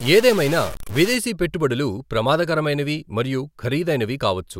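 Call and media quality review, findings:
Stuck bit, 0.00–1.15 s, clearing just before "పెట్టుబడులు ప్రమాదకరమైనవి మరియు". Likely converter or data-line fault: one bit held fixed, offsetting about half the samples by a step of about -25 dBFS. Result: harsh, buzzy distortion on the speech; gaps filled with steady noise from sign flips around zero.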